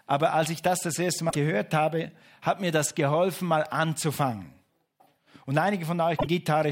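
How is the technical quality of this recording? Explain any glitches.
The speech recording has two short glitches, both damaged data in a compressed stream: at 1.26 to 1.36 s, after "ich das das erste" and before "habe hat mir das", and at 6.16 to 6.27 s. Corrupted frames make the decoder lose sync, giving a brief glitch.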